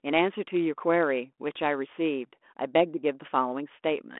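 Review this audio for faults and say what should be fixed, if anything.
No faults found; nothing here needs fixing.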